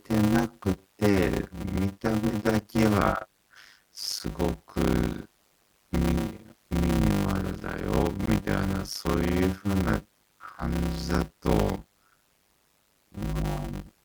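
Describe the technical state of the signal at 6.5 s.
At 6.49 s a block of digital silence about 5 ms long cut into the speech, cutting in and out without fade and heard as a tick or dip. Underneath, a block size mismatch (padded) persists: each short 256-sample write is topped up with zeros, producing a 100 Hz buzz and slowing the speech to 0.533 times its speed with its timbre kept.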